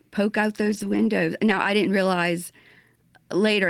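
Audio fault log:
0.57 to 1.03 s and 1.47 to 1.53 s, lost packet rebuilt from error correction: the speech never drops out, but in both stretches it turns rougher and noisier, because each missing packet was replaced by a low-bitrate copy carried in the packet that followed it. The longer run holds about 240 ms of rebuilt audio, which fits a string of 20 ms packets. The shorter one is a brief 40 ms patch. This differs from packet-loss concealment because the actual speech continues, only coarser, with no smeared, repeated or faded guesswork.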